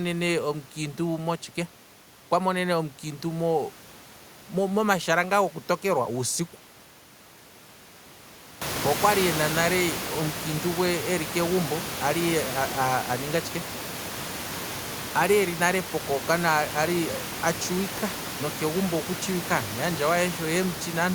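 The speech signal carries no technical faults, and the only change is the room's own background noise, which climbs by about 16 dB at around the eight-and-a-half-second mark and then sits about 11 dB below the speech.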